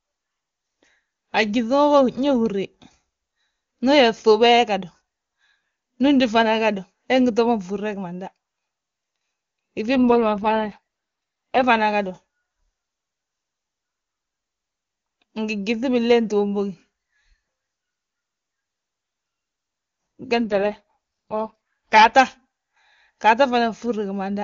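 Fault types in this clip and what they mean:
AMR rate drop: Twice, from 9.96 and 20.46 s, the speech turns rough and synthetic for 1.7 s with no gap, which fits a drop to 6.6 kbit/s.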